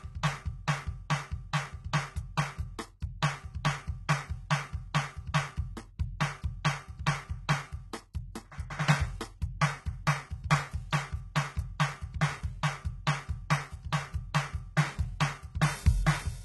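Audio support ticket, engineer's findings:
Treble gritty and metallic throughout the music, nothing above 11.8 kHz. Likely HE-AAC compression with heavy damage, which fits a very low bitrate around 16 kbps. Upper band rebuilt from copied lower bands, harmonics misaligned across the crossover.

Pre-echo at 3.00 s: short hiss ahead of a sharp attack, onset softened, spread about 19 ms. Transform codec quantisation noise distributed across the whole block, so noise scaled for the loud attack fills the quiet gap before it.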